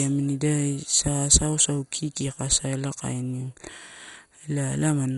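All the way through, the speech has heavy MP2 compression, likely from a rate near 56 kbps. Nothing above 11.2 kHz survives, so it's dull, gurgly and granular, with upper bands flickering.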